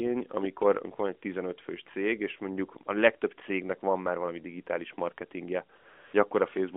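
A speech clip carried over a narrowband mobile line, with light AMR-NB coding that fits a 12.2 kbps mode and band-limits it to roughly 250 Hz to 3.5 kHz. From 5.78 to 6.14 s, just after "már valami digitális marketingje", the real background gives way to a smooth, steady hiss. That is AMR comfort noise: the sending phone judged the talker silent, stopped sending speech frames for 360 ms, and the receiver filled the gap with synthetic noise.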